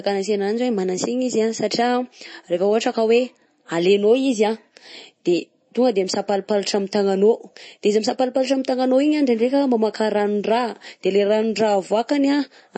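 A speech recording with plainly audible MP3 compression damage throughout: the sound is watery and swirly, with chirpy sibilants. On a spectrogram, everything stops sharply at 8.3 kHz, with speckled holes below where weak bands drop out, which fits a likely bitrate around 32 kbps.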